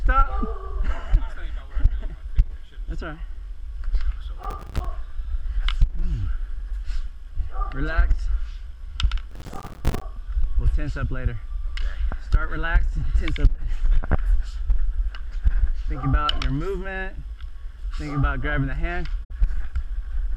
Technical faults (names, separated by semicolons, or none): processor overload crackle; digital broadcast dropout